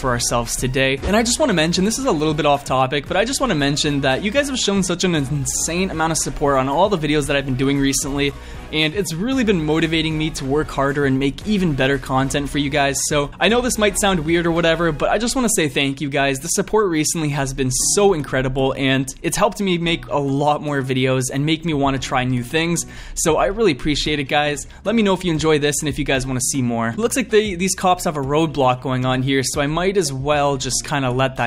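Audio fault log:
No faults are audible anywhere in the recording.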